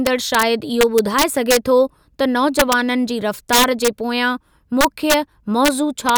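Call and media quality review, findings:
Integer overflow on speech peaks: harsh sign-flip cracks at 0.07–0.43, 0.81–1.57, 2.59–2.73, 3.53–3.88, 4.81–5.14, 5.65–5.68, 6.09–6.18 s. Peaks run about 1–4 dB over full scale, and an unsaturated gain stage wraps instead of clamping.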